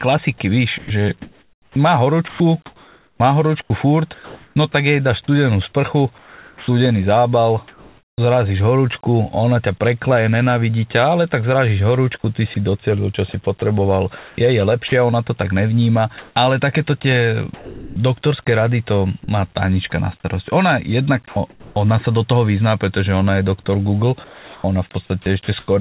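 Choppy speech with clipped syllable edges, from 0.78 to 8.18 s, 12.22 to 21.76 s and 23.64 to 25.68 s, over telephone-band audio with nothing above 4 kHz. This is likely sound chopped by the voice detector, its gating replacing about 2.9, 1.4 and 0.6 s with comfort noise.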